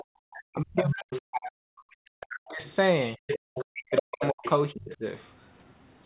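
A short speech recording where the talker keeps getting squashed during double talk: from 0 to 1.68 s, 2.27 to 2.63 s and 3.73 to 5.04 s the voice dips by up to about 40 dB, likely because the echo canceller couldn't separate it from the loudspeaker echo. There's also the other side's voice leaking through at 0.32 to 1.19 s, 1.91 to 2.71 s and 3.27 to 4.97 s, about 10 to 20 dB under the speech, which points to leftover echo. At 3.39 to 3.44 s the background is briefly gated by the echo canceller, with the room sound ducking about 39 dB before coming back.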